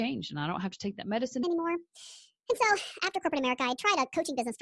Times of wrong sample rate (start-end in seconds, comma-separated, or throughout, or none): 1.43-4.62